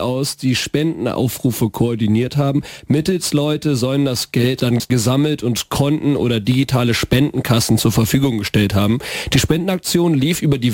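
From 4.6 to 4.9 s, chunks out of order: a 100 ms chunk plays two chunks late, jumbling the sound across three hard joins. Unlike a dropout, nothing goes missing.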